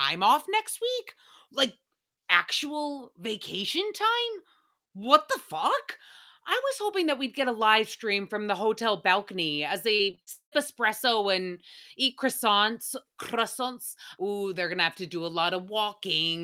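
From 9.95 to 10.54 s, between "the hotel balcony as" and "espresso and eat croissants", the speech turns choppy. This is repeated packet loss: five gaps, the longest 190 ms, each patched by extending the previous sound, concealing over half the stretch.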